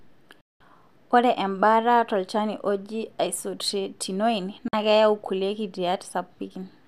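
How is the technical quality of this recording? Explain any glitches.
The speech is interrupted twice by a digital broadcast dropout: once from 0.41 to 0.61 s, roughly 0.2 s long, and again from 4.68 to 4.74 s, about 50 ms long. Each time the receiver stopped getting usable frames, either because the signal was lost or because frames failed their error check, so it muted until clean data returned. The sound drops to silence behind a fade of only about 3 ms and then resumes further along the speech, with the missing stretch gone for good. That hard, near-instant mute to silence is what separates it from an analogue fade or a concealed packet loss, where you would hear noise, smearing or a repeated fragment instead. The 192 ms and 48 ms gaps fit the loss of eight and two frames.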